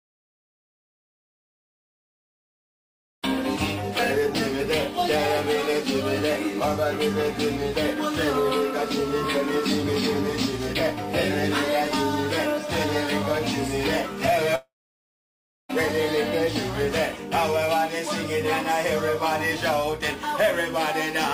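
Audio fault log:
14.55 to 15.71 s, long network dropout: the sound breaks off into a brief fading buzz, then about a second of silence, and picks up again with roughly 1.1 s gone. That's likely a stretch of packets that never arrived, patched over briefly by concealment before it gave up.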